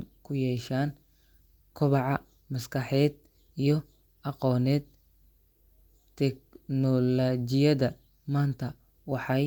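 Listening to the speech, nothing stood out as a technical problem.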